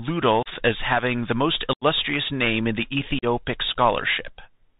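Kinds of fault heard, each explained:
Bluetooth CVSD headset codec: The speech went through the narrowband headset codec, coding one up-or-down bit per sample in a way that fits a 64 kbps link. Nothing above 4 kHz survives, sibilants turn scratchy, loud bright sounds distort, and a granular hiss sits underneath throughout.
Unconcealed Bluetooth headset packet loss: Short voice packets between headset and phone went missing, and nothing filled the gaps. Abrupt holes open at 0.43 s (30 ms), 1.73 s (82.5 ms, about ten packets) and 3.19 s (37.5 ms), each with the speech returning briefly quieter.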